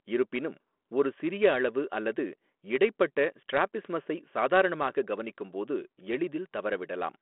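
Nothing stood out on listening to this speech recording, which comes through a narrowband G.726 telephone channel at 32 kbit/s.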